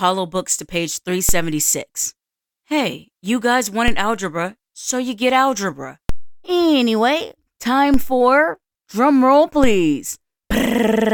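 At 1.29, 3.88, 6.09, 7.94 and 9.64 seconds, the waveform's zero line jumps. Each is a DC step of about -8 dBFS. The baseline shifts suddenly, then drifts back over the next fraction of a second, as a high-pass near 2 Hz pulls it toward zero. Each jump is heard as a low thump or click. The sound itself carries on unchanged through every step.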